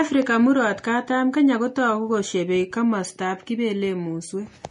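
Speech that has likely gone through transcoding between lossy codecs, a low-rate Vorbis-style encode then MP3, so both codecs' artefacts layer throughout, with nothing above 10.6 kHz.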